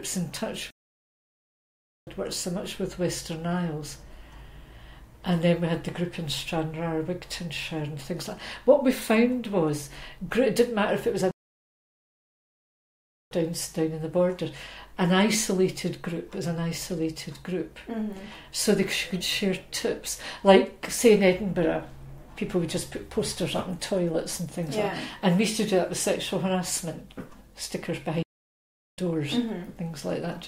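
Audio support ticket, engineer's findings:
Playback stall, 0.70 to 2.07 s: output drops to silence mid-flow for about 1.36 s, then resumes. Likely cause is the player's buffer running dry or its playback thread being blocked.

Playback stall, 11.31 to 13.31 s: longest gap, a full 2.0 s of silence before the sound continues. Likely the same starvation or blocking mechanism.

Playback stall, 28.23 to 28.98 s: shorter, about 0.75 s dead air, then recovery. Likely the same mechanism.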